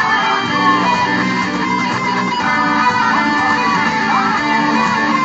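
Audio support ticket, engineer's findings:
Dropped samples, likely at the capture or buffer stage: a couple of samples missing from the stream, roughly 0.05 ms of audio, so the waveform steps straight to a later value. Heard as one sharp click at 0.74 s, a thin vertical line across the spectrum.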